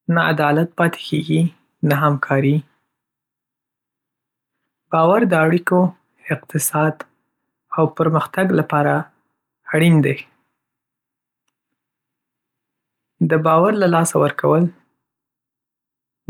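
At 4.96 s there is a bit error spike, a single sharp tick where one flipped bit throws two consecutive samples off by a power of two before the signal snaps back. Unlike a dropout or splice click, nothing is lost or shifted, and the tick is broadband and unrelated to the speech around it.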